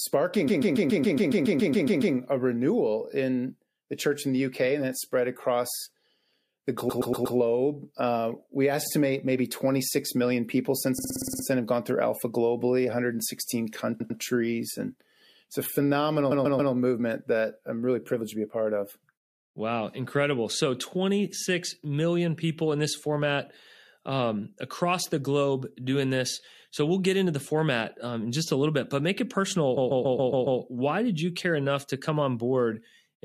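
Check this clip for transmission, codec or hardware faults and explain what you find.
The speech stutters six times, looping a short slice. This is repeated frames: a run of compressed frames was sent more than once, so the decoder replays it and the clip gets longer. The worst is 0.47–2.14 s, a 129 ms block replayed 12 times before "a renewal in the". The others are 6.89–7.36 s, 10.98–11.44 s (a 48 ms block, eight extra plays), 14.00–14.20 s, 16.30–16.72 s between "it's a phenomenal" and "movement that I'm really", and 29.76–30.60 s after "bit but make it". Each repeated block fits a run of about six frames.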